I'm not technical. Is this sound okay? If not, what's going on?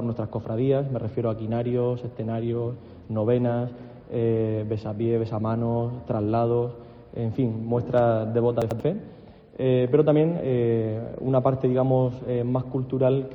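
No. From 8.62 to 8.80 s, frames out of order: two tenth-second chunks play swapped, making a garbled flutter. Unlike a skip, no sound is missing.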